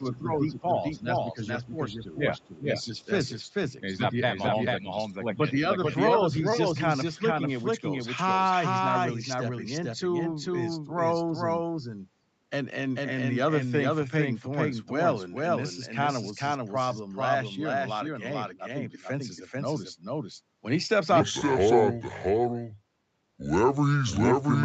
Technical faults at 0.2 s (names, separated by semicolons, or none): doubled audio track; speech suppressed in double talk; other side's voice leaking through